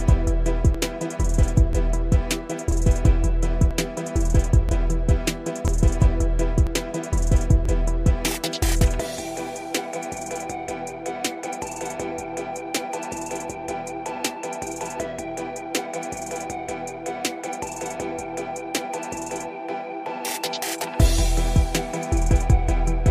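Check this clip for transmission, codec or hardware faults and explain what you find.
One fault appears: overlap between stream segments, at 0.75, 1.73, 2.72, 3.71, 4.69, 5.68, 6.67 and 7.65 s. Overlapping time stamps at each 1-second segment boundary make the player discard 6 to 19 ms of undoubled audio, so the waveform jumps, giving a regular click or skip.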